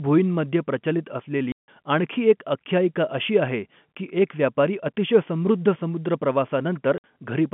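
Packets were lost and the receiver played silence in their place (packet loss filled with silence). The first gap runs from 1.52 to 1.68 s, 160 ms between "भुईंमध्ये प्रचलित" and "आणखी एक आख्यायिका अशी". The second runs from 6.98 to 7.04 s, 60 ms, over band-limited G.711 telephone audio. Both have hard edges, and their lengths fit 20 ms packets.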